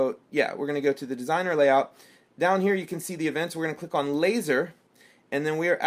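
No technical faults can be heard anywhere in the audio. Nothing in the signal points to a problem in how it was captured, carried or reproduced.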